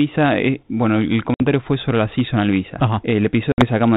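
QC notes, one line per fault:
1.34–1.41 s and 3.52–3.63 s, packet loss on an ADPCM call: about 60 ms drops out each time, a few packets' worth, first between "bueno el" and "fue sobre la seasonal", then right after "sobre la seasonal visa". Each gap is a hard-edged silence. Because the decoder's adaptive predictor and step size lose track of the sender's during the hole, the sound comes back with some slight roughness, then settles within a few tens of milliseconds as the 32 kbit/s G.726 stream re-syncs.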